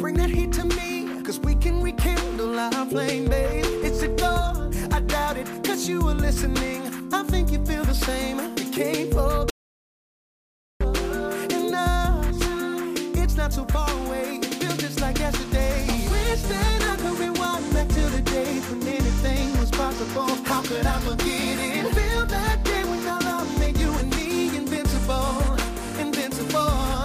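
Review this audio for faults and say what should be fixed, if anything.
At 9.50 s the audio cuts out abruptly and stays in silence until 10.81 s, about 1.3 s of lost material, with no room tone or noise floor underneath. The sound then resumes mid-flow. This is an audio dropout to silence: the input signal was most likely interrupted, through a momentary disconnection, link failure or mute, while the recorder kept writing silence. To prevent it, secure cabling and interfaces and monitor input levels during capture.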